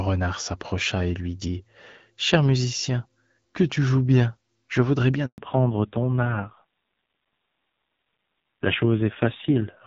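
A handover gap at 5.26 to 5.38 s, just after "joues bien je voudrais", cuts the speech to silence for 120 ms while the call switches networks and no frames arrive. A fallback to narrowband follows at 5.38 s and runs to the end. Everything above 4 kHz disappears, and the speech turns duller and rougher than the clear HD Voice before it, which fits a drop to a low narrowband rate around 5.9 kbit/s.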